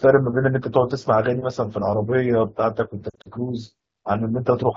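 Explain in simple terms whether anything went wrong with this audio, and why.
Between about 3.09 and 3.28 seconds, the radio link garbled several chunks of the speech so badly that the phone had to throw them away. These are lost AMR speech frames. Roughly a tenth of a second went missing, in short gaps of up to 40 ms scattered across that stretch. The decoder filled each gap by guessing from the last good sound, so the speech there wobbles and dips briefly.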